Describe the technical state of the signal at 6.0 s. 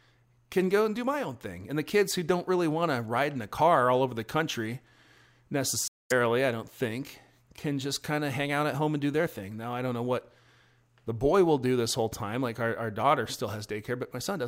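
At 6.0 s the signal sits inside a Bluetooth stall from 5.88 to 6.12 s, likely caused by interference delaying packets until the headphones' buffer ran empty. The speech cuts to 227 ms of silence, then resumes with "I don't think can".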